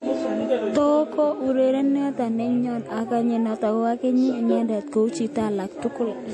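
Heavy lossy encoding runs through the whole recording, most likely MP3 compression at a low rate, around 48 kbps. Starved of bits, the encoder has thrown away everything above about 11.5 kHz and zeroed quieter frequency lines that then flicker between frames. The speech is dull at the top, with a plainly audible watery, swirling texture, metallic chirps on s sounds, and consonant attacks smeared rather than crisp.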